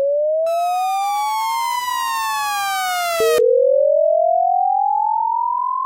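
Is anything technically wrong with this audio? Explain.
No, no technical faults here.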